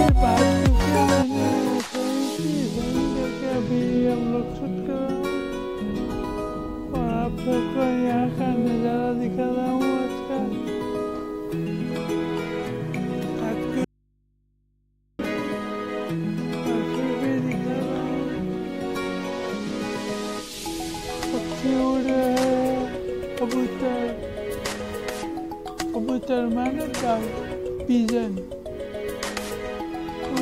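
At 13.85 s an audio dropout to a faint residue begins. For 1.35 s, only low mains hum remains, far below the signal. The source was likely lost while the input stayed open.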